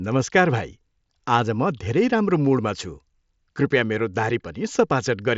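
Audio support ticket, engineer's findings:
Nothing stood out on listening to this speech clip; the Bluetooth mSBC headset path sounds as expected for that codec, with content topping out around 7.7 kHz.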